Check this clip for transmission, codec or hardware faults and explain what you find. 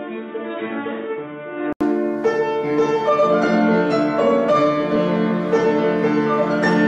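One fault is present. From the start until about 1.81 s, the sound is dull and boxy, with nothing above 3.8 kHz. It sits about 5 dB quieter over a faint, different background noise. Then comes an 80 ms silence before fuller sound returns. The likely cause is an input switched to a poorer device. Unlike a codec bandwidth drop, the level, noise floor and tone all change together at a single break with a gap.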